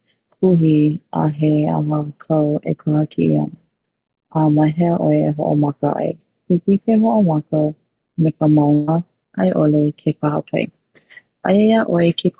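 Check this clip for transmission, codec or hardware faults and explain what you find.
There's one transmission fault, a burst of packet loss at 8.74 to 8.89 s. A run of packets never arrived in time, so the receiver filled about 134 ms by stretching the last bit of sound it had and fading it down. You hear that as a brief held buzz or hiss that dies away, then the speech picks up again with roughly 140 ms simply gone. The whole thing sits on a call path with nothing above 4 kHz, which fits G.711 mu-law telephone coding.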